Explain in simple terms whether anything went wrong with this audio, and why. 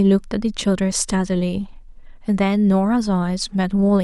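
A tiny tick interrupts the speech at 0.92 s. It's a block of digital silence: for about 3 ms the sound drops to silence and snaps back without any fade. The gap fits a 128-sample block the program likely didn't fill in time.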